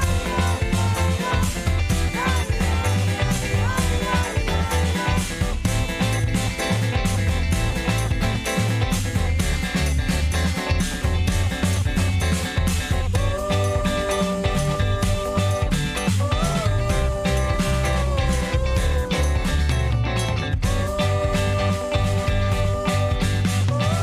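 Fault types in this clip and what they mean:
No faults turn up anywhere in this one, so there's nothing to list.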